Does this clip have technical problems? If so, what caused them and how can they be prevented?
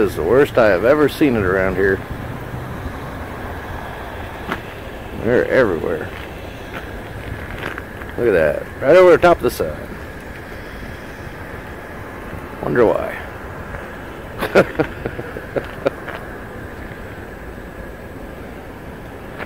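No, nothing stood out as a technical problem on listening to this clip.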